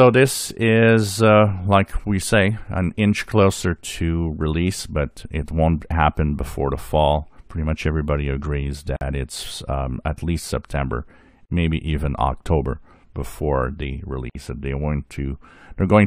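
At 8.96 s, 11.46 s and 14.30 s the sound breaks with gaps of 49 ms, 40 ms and 55 ms. These are gaps at a join of encoded pieces. Each piece kept its encoder's leading delay and padded final frame, so the seams are audible. Unlike a dropout, where material goes missing, the sound resumes exactly where it stopped. The edges are abrupt but softened by the codec.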